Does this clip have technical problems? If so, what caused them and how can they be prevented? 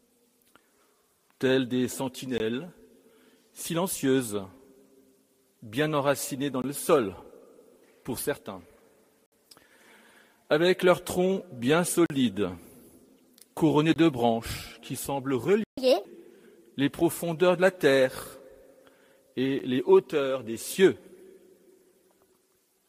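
Yes. The audio has three kinds of fault.

Block of digital silence: the sound drops abruptly to dead silence and returns with no fade. The sub-20 ms gap at 19.59 s comes across as a tick. The short 20 ms gaps at 2.38–2.40 s, 6.62–6.64 s and 13.94–13.96 s, the 40 ms gap at 12.06–12.10 s and the 60 ms gap at 9.26–9.32 s are heard as brief holes. Each is a block of samples replaced by zeros, typically because the output buffer wasn't filled in time. Giving the audio thread more headroom, through larger buffers and no blocking work in the callback, prevents this.

Playback stall: at 15.64 s the sound halts mid-flow and stays silent for about 137 ms, until 15.78 s. The player likely ran out of data or had its thread blocked, so output ceased until it recovered. A deeper playback buffer and keeping the playback thread free of locks and slow I/O prevent this.

Catch-up at higher speed: right after the stall, from 15.78 to 16.05 s, the audio runs at 1.5 times normal speed. 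Pitch rises by about seven semitones, so the sound turns briefly quicker and higher. The player is resampling its backlog to recover the lost time. Avoiding the stall removes the need for catch-up, and a gentler rate change or time-stretching without pitch shift would make any recovery far less noticeable.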